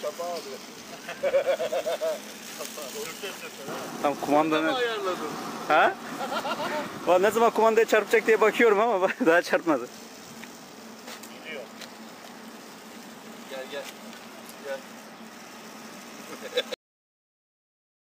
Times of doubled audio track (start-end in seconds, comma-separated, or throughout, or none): none